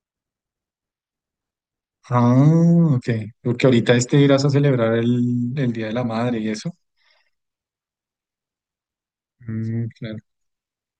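No faults turn up anywhere in this speech recording, so there's nothing to flag at any point along the way.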